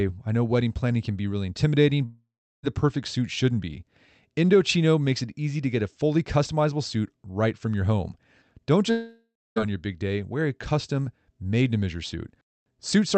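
Long network dropouts at 2.05–2.65 s and 8.91–9.58 s: the sound smears into a fading buzz, then goes quiet for about 0.36 s and 0.27 s. It resumes with roughly 0.58 s and 0.66 s missing, likely because packets stopped arriving and the receiver had to conceal the gap.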